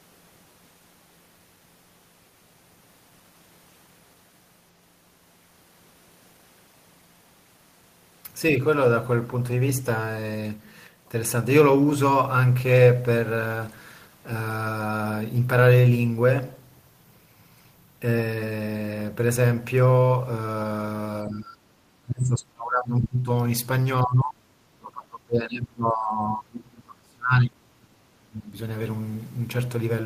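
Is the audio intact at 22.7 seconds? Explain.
No. From 21.26 to 23.29 s the speech is attenuated by up to about 25 dB, which sounds like speech suppressed in double talk. The likely cause is an echo canceller mistaking the near talker for loudspeaker echo while both sides spoke, and ducking it.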